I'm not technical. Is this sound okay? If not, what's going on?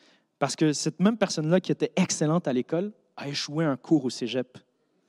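Yes, nothing stood out as a problem when I listened to this recording.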